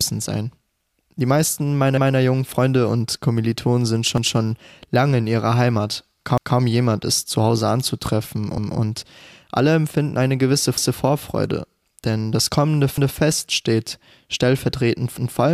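The speech was handled in 2-second chunks that overlapped, each starting 200 ms before the last had finished, so at 4.18 s (before "lange in ihrer"), 6.38 s (before "jemand ist zu") and 10.78 s (after "alle empfinden eine gewisse") a 200 ms stretch plays twice, heard as a brief stutter.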